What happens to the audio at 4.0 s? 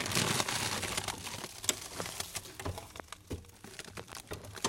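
At 4.00 s a loud pop breaks in, two sharp thumps in quick succession that are finished by 4.15 s and peak roughly 15 dB above the surrounding sound. The likely cause is a sudden voltage step, such as a plug, switch or static discharge, shaped by the circuits after it. Unlike a dropout or a digital glitch, nothing is lost: the sound carries on unbroken underneath, with the pops simply laid on top.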